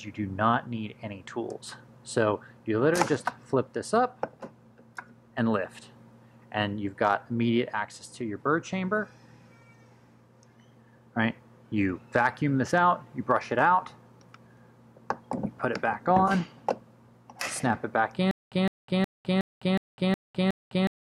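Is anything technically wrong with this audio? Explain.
Yes. From 18.31 s to the end, a stutter with silent gaps: a 160 ms fragment repeats seven times, each followed by about 205 ms of silence. A stalled stream likely caused it.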